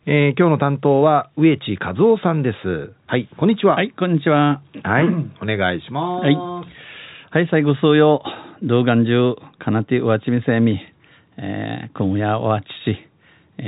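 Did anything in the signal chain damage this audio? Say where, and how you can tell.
No, nothing in the chain damaged this speech, which comes through G.711 mu-law telephone coding at 64 kbps with the expected band limit below 4 kHz and with at most a faint, level-following quantisation hiss that belongs to the format itself.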